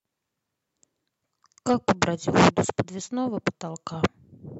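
Nothing in this short bit of speech trips over itself: no dropouts, no glitches, no faults turn up anywhere along the way.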